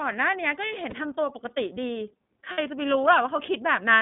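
Speech carried over an iLBC codec link: the signal was squeezed into a narrowband line running only from about 150 Hz to 3.6 kHz and coded frame by frame. The roughness fits iLBC's 13.33 kbps mode with 30 ms frames. Everything above 3.6 kHz is gone, so sibilants and consonants sound dull. The codec damage is plainly audible as a grainy, slightly synthetic edge on the voice throughout. On top of that come lost iLBC frames, where packets failed to arrive and the decoder filled the hole by repeating the last pitch cycle blended with noise. At 0.89 to 0.94 s the dropout is short enough to fit a single lost 30 ms frame. At 2.52 to 2.59 s it lasts about twice as long, consistent with two consecutive frames. Each gap is heard as a brief held, buzzy vowel-like smear in place of the real sound. Because each iLBC frame decodes independently, the voice snaps back cleanly right after both gaps.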